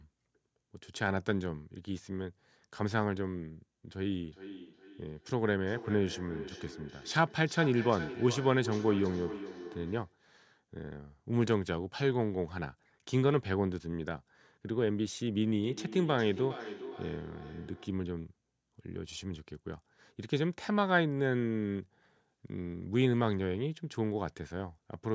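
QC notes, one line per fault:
3.97–10.24 s: feedback echo between two devices. Speech recurs roughly every 0.4 s, peaking about 12 dB below the direct signal, as a second device's playback re-enters the microphone uncancelled.
15.64–18.06 s: feedback echo between two devices. The same loop returns at a similar spacing and level, each repeat thinner and more ringing after another pass through speaker and microphone.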